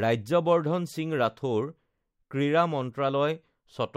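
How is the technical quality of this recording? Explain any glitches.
No glitches can be heard anywhere in the recording; the signal stays continuous and stable throughout, with nothing breaking into it.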